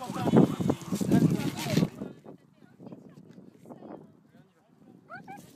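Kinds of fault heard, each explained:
Zipper noise: a drop of roughly 25 dB applied in unsmoothed 3 dB steps, about twenty per second, ticking audibly from 1.78 to 2.18 s.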